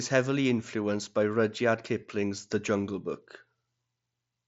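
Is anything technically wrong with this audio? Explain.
No, nothing in this speech stood out as a technical problem on listening.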